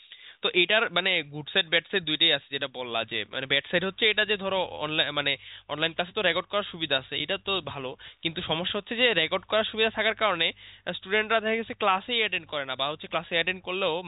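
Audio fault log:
No faults found.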